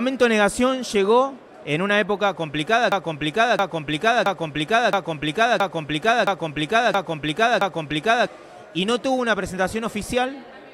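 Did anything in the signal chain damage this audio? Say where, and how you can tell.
Yes. A broken-record loop runs from 2.92 to 8.27 s. One 0.67 s fragment repeats exactly eight times without decaying, unlike echo, likely from a stalled playback buffer.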